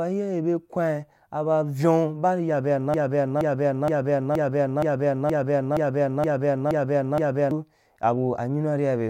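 A speech recording where, right after "ri ya", a 0.47 s fragment repeats back to back ten times from 2.94 to 7.51 s, a broken-record loop likely caused by a stalled player or stream.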